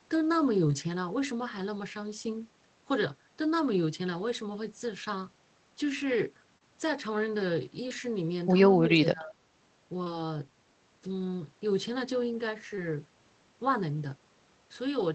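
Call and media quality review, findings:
Short concealed packet loss at 0.67, 5.04, 6.58, 7.89, 10.04 and 12.76 s. Brief smears or wobbles. The jitter buffer or decoder filled each gap of about 20 ms, which fits 20 ms frames.

Speech suppressed in double talk, 8.86 to 9.38 s. The speech dips by about 20 dB, for around a third of a second in total. Likely cause: the echo canceller ducked its own talker along with the loudspeaker echo.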